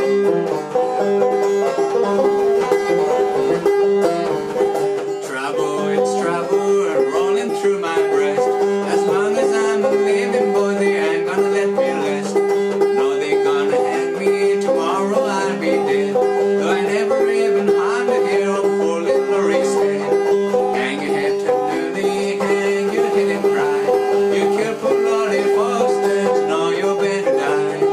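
A hard, raspy buzz with a dense stack of harmonics sits under the audio from 2.09 to 4.68 s, where it stutters on and off, and again from 22.68 to 25.84 s, where it holds steady. It runs about 20 dB below the signal. This is GSM phone buzz, with a fundamental near 217 Hz. A nearby 2G handset is pulsing its transmitter at that rate, and the audio circuitry rectifies the bursts. The first stretch fits a data transfer, the second a call.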